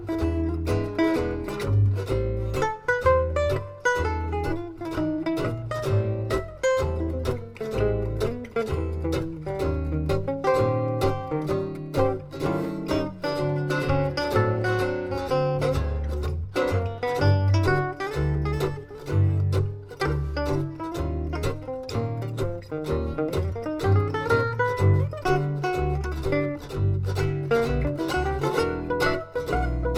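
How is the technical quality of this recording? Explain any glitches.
No glitches can be heard anywhere in the recording, and the signal holds steady throughout without any technical disturbance.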